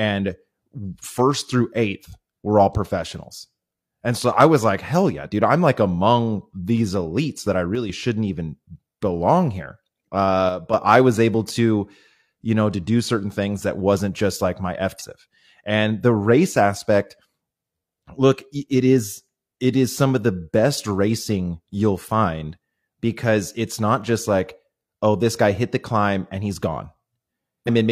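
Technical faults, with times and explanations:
7.75–7.90 s and 10.49–10.74 s, one channel drops out: Likely one stereo channel going silent for a fraction of a second. Once the channels are summed to mono, the shared content falls abruptly by about 6 dB and then returns. Anything carried only by that channel vanishes for the duration.
14.96–15.02 s and 27.64–27.69 s, damaged data in a compressed stream: Corrupted bytes in the encoded stream make the decoder misread frames and lose sync while it hunts for the next valid frame header. Each event is heard as a brief chirp or blip lasting roughly 50 to 60 ms.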